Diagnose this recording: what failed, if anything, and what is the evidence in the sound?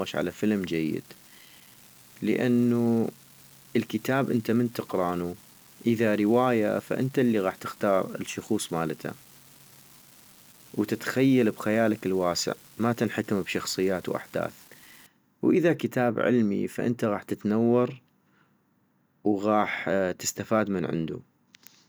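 An unreliable data bit affects the speech from 0.0 to 15.06 s, ending just before "واذا كتاب علمي فانت". It sits at the converter's digital data lines: one marginal bit flips in a random share of samples, giving equal-sized spikes heard as a steady fizzing crackle that continues through pauses.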